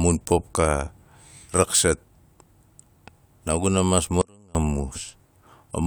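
At 4.22 s the speech cuts out abruptly and comes back at 4.55 s, a gap of about 335 ms. That's an audio dropout to a faint residue: only a faint trace of the signal remains, roughly 30 dB down, likely from a brief break in the path while the chain stayed live.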